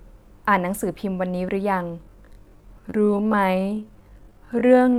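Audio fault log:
1.99–4.98 s: time-stretched section. From 1.99 s to the end the speech abruptly slows to 0.61 times its pace while the pitch stays put, so it drags. This is likely software lengthening the audio by repeating short slices to hold pitch.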